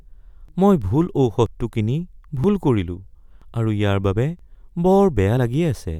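At 0.49 s (before "মই ভুল"), 1.46 s (after it), 2.44, 3.42 and 4.39 s: audio missing between chunks. A tiny slice is likely lost at each one-second chunk join, heard as a skip and seen as an abrupt waveform step.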